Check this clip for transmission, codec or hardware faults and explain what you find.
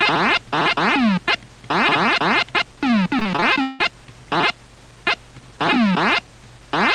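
One fault: repeated packet loss (robotic sound), from 3.19 to 3.81 s. The sound turns choppy, with six holes in quick succession, the longest 173 ms. Lost or late packets were patched by extending the preceding sound, covering about 42% of that stretch.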